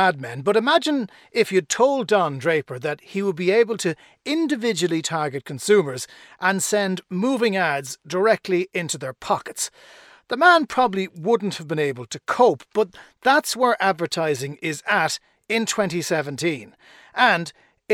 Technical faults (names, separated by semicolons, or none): none